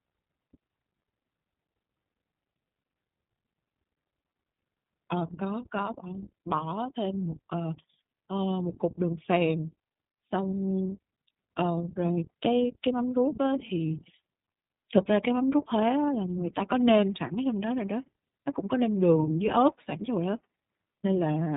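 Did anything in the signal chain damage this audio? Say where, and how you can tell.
Yes, at the codec stage, and it runs through the whole speech clip. It's the iLBC codec: there's a hard ceiling at about 3.8 kHz, and the voice has that clear but slightly gritty, synthetic edge from start to finish. The roughness fits 20 ms frames, each with its excitation coded on its own without borrowing from the last. The damage is plainly audible, and the 20 ms frames mean the 15.2 kbps mode.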